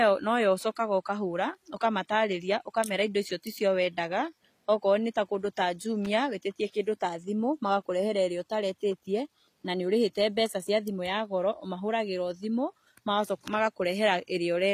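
Right through the recording the treble sounds gritty and lispy on s sounds, with nothing above 14.9 kHz, likely HE-AAC compression rebuilding the top end at something like 24 kbps. At 6.05 s there's a quick burst of loose connector crackle, a contact briefly making and breaking and chopping the signal.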